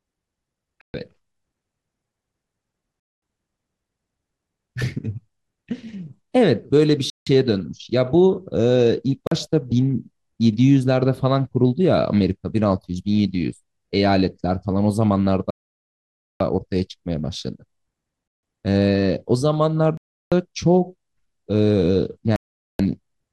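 Speech with eight dropouts to silence at 0.81, 3.00, 7.10, 9.27, 15.50, 18.28, 19.97 and 22.36 s, lasting roughly 0.13, 0.22, 0.17, 0.04, 0.9, 0.15, 0.34 and 0.43 s. These are likely Bluetooth stalls: the receiver's buffer ran empty while delayed packets were resent. On a waveform each shows as an abrupt flat gap, and on a spectrogram as a blank vertical band with sharp edges, the longest at 15.50 s.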